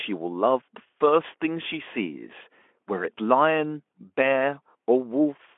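Nothing in this speech recording stood out as a technical problem on listening.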